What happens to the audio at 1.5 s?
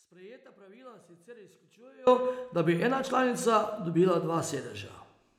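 At 1.5 s the speech sits inside an audio dropout to a faint residue, already under way at the start and ending abruptly at 2.07 s. Only a faint leak roughly 25 dB down remains, likely from a live path that lost its signal, unlike a pause or fade.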